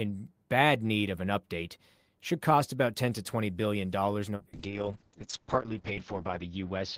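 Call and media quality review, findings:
Call bitrate drop from 4.37 s, after "billion dollars", to end: speech turns rough and muffled, top cut from 20 kHz to 8 kHz. Opus encoder starved, consistent with roughly 32 to 6 kbps.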